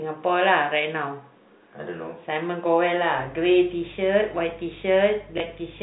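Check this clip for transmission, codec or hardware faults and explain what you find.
Two faults are audible in this telephone-band speech: mains hum in the second half of the clip and a brief repeated-packet glitch near the end.

Mains hum starts at 3.18 s and runs to the end of the clip. A ground loop or nearby transformer is leaking the power line into the signal, producing a steady 50 Hz tone with low harmonics, roughly 25 dB below the speech. It differs from a low buzz caused by packet repetition because it holds a constant pitch and level throughout and does not start and stop around gaps.

Packet loss with the last packet repeated occurs from 5.38 to 5.40 s. A 20 ms stretch of audio went missing, which fits one lost 20 ms packet. The receiver filled the gap by replaying the previous packet. The replayed segment produces a small blip. A silent dropout would instead leave a gap. Because only one packet was lost, there is no sustained 50 Hz packet-rate buzz that could be confused with the hum.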